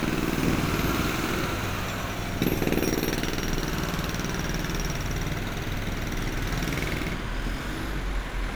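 No technical faults are audible.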